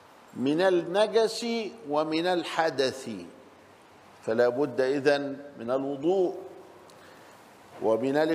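No technical faults are audible.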